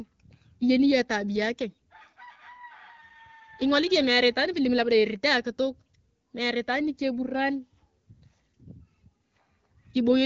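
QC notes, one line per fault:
No faults: the speech carries the light coding character of an AMR wideband (HD Voice) path running at about 12.65 kbit/s, its normal working state at that rate, with the band above 6.4 kHz filled in by the codec's shaped noise.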